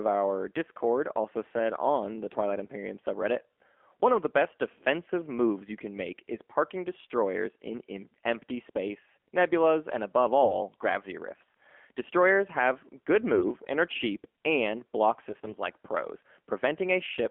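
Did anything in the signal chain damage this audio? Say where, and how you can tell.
Yes. The AMR narrowband mobile codec, at the codec stage, shapes the whole clip: the speech is confined to 250 Hz–3.4 kHz and sounds plainly buzzy and synthetic, which fits a low mode near 7.4 kbps.

AMR bit errors, at the network stage, hit 10.42–10.57 s, 13.34–13.47 s and 15.28–15.54 s. The speech turns scratchy and gargly while keeping its pitch and level, because corrupted weakly protected bits misplace the pulses that drive the vocal-tract model.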